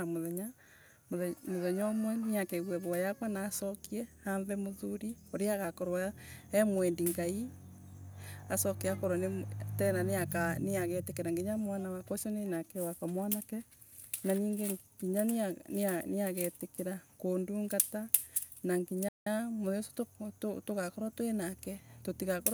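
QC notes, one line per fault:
19.08–19.27 s, playback stall: the speech drops to silence for 177 ms mid-flow, then resumes, likely because the player briefly ran out of data.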